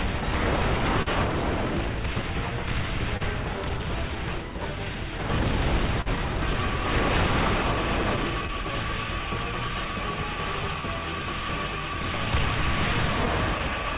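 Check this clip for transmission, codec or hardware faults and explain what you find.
Timing is the main problem here: a clock mismatch, a run of small corrections, three late-packet stalls and a cluster of tiny gaps. Everything tops out at 4 kHz, which fits a narrowband telephone-style call path.

Clock drift between sender and receiver runs through the whole clip. The sender's clock is running roughly 3% slow, so the jitter buffer keeps starving and has to be topped up.

Repeated timing corrections run from 0.83 to 13.91 s. The receiver keeps stretching bits to compensate, playing at about 99% speed and adding roughly a fifth of a second overall.

There are three short stalls from late packets, at 1.02–1.08 s (40 ms), 3.17–3.22 s (30 ms) and 6.01–6.08 s (44 ms). Each time the buffer ran dry, so the last sound gets held with a slight buzz or dip, and nothing is actually lost.

Scattered short gaps show up between 7.58 and 8.50 s. 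About three tiny holes, each around 10 ms or less, get patched by continuing the sound, leaving brief ticks or smears.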